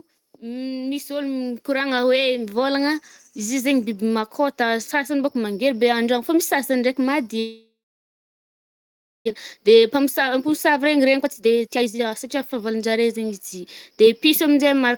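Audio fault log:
0.40–2.68 s, automatic gain rising: the level and background climb together by 9 dB over a couple of seconds as the gain control lifts a quiet input.
7.39–9.29 s, long network dropout: the sound trails off into a fading buzz and then about 1.5 s of silence, and about a second of audio never returns. Likely lost packets.
9.57–14.30 s, jitter buffer speed-up: the speech runs at 118% speed with its pitch unchanged and sounds hurried, as the receiver drops short pitch periods to shed about a second of built-up delay.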